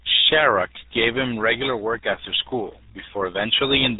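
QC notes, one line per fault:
Throughout: RealAudio 14.4 codec. The speech has been squeezed through the old dial-up RealAudio 1 speech coder, and the degree of smearing fits its 8 kbit/s rate. At that rate the coder keeps only a rough model of the voice and discards everything above about 3.8 kHz, so consonants lose their edges and sibilants vanish. The damage is heavy, leaving the speech muffled and gargly, with a wet, bubbling texture where detail used to be.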